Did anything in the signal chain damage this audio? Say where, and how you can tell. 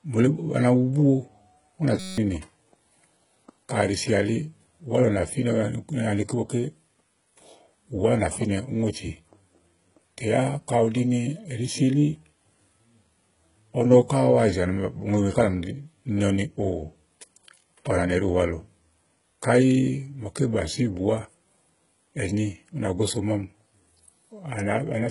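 Yes. Throughout the speech, the codec stage has done heavy damage, most likely HE-AAC compression at a very low bitrate, around 12 kbps. Nothing reaches above 11 kHz. The band that remains is coded with few bits, and the upper part is synthesised by copying lower bands upward rather than carried from the original. Harmonics in that rebuilt region don't line up with those below the crossover, so s sounds come across gritty and lispy.

At the driver or buffer stage there is a system hang loop. Right after "ù nà", from 2.00 to 2.18 s, the host stalled while the output hardware kept replaying one 5.33 ms slice, which fits a 256-sample ring buffer. That slice repeats 34 times in a row, and the exact repetition turns into a steady buzz at 188 Hz in place of about a fifth of a second of audio.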